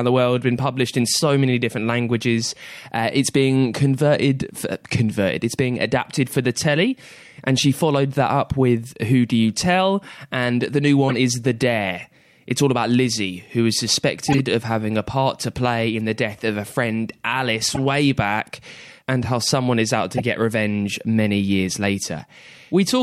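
Short, loud chirps and noise bursts break into the speech at 11.09 to 11.15 s after "the new", 14.28 to 14.40 s after "who is", 17.71 to 17.79 s, and 20.15 to 20.22 s after "how someone is out". Each is a corrupt frame decoded: flipped bits in a few compressed frames were played anyway, throwing energy to wrong frequencies, peaking around -5 dBFS, or about -10 dBFS at 17.7 s.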